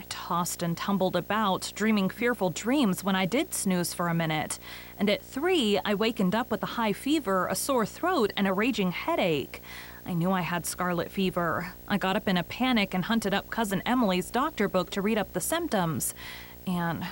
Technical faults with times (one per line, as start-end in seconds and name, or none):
0.00-17.11 video or display buzz